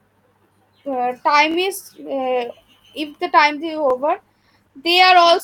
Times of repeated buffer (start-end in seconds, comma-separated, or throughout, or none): 1.51-1.56, 3.90-3.93